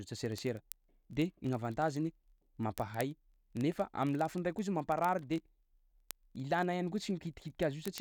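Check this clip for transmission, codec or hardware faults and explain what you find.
There is one fault, word clock ticks, running from 0.11 s to 8.0 s. The receiver's clock is not locked to the sender's, with an error of about 0.1 percent. Every time the clocks slip, one sample drops or repeats. This produces sharp ticks of uneven strength, roughly every 20 ms, several hundred in all.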